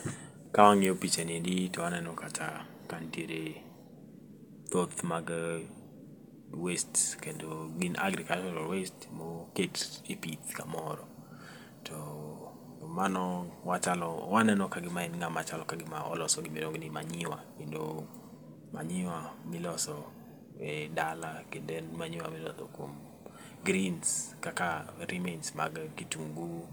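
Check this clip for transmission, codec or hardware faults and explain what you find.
No transmission, codec or hardware faults are audible anywhere in this speech recording.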